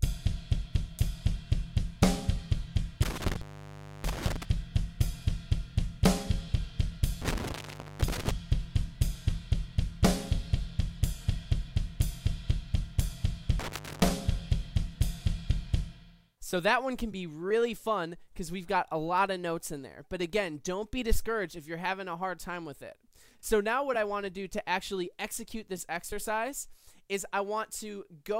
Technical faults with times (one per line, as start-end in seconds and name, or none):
3.03-4.43 intermittent contact
7.21-8.31 intermittent contact
13.59-14.11 intermittent contact